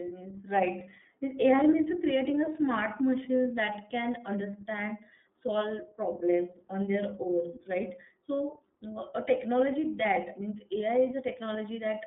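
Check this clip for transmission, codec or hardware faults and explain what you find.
One codec fault runs through the whole recording: iLBC codec coloration. The speech sits in a narrow band from about 200 Hz to 3.6 kHz. Everything above that is gone. The codec codes each frame's excitation on its own, with no carry-over from the previous frame. That makes the voice sound slightly rough and synthetic. The roughness is plainly audible. The frame rhythm points to the 30 ms mode at about 13.33 kbps.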